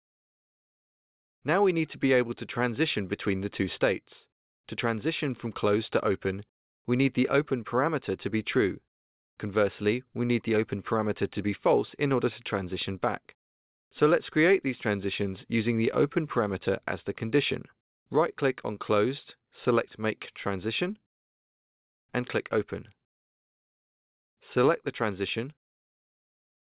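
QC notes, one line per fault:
No faults logged; content stops at 4 kHz, consistent with a G.711 mu-law call leg at 64 kbps.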